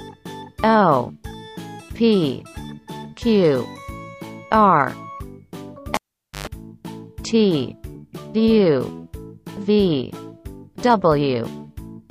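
At 5.94 s a sharp pop cuts the sound away, leaving near silence for about 0.48 s. A harsh 50 Hz hum then rises for about 0.11 s before a second pop brings the audio back at 6.47 s. This is a cable pulled and plugged in while live. The first pop is the contact breaking. The hum comes from the plug tip touching the socket alone, without its ground, so it picks up mains. The final pop is the full connection closing.

At 7.94 s there is a brief smeared blip where the audio lurches forward by a sliver, roughly 20 ms, about one compressed frame. This is compressed frames skipped. A frame of roughly 23 ms was never played, either missing from the stream or rejected as damaged by the decoder, so playback jumps ahead. Neighbouring frames overlap, which blurs the join into a soft blip, not a hard click.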